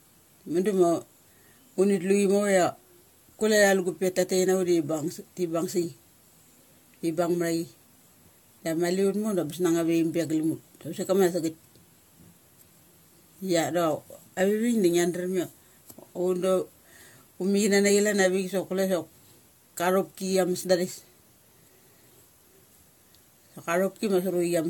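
Throughout, the speech shows generation loss: swirl, hollowness and blurred attacks beyond what one encode would explain, nothing above 17 kHz, likely from about four AAC passes.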